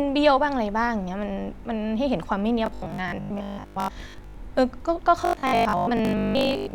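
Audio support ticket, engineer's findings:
Robotic sound from repeated short buffers, 2.66 to 4.34 s and 5.21 to 6.73 s. Speech becomes a rigid metallic buzz at 50 Hz. Likely audio starvation, with the last 20 ms chunk looping. Most of the real audio is skipped.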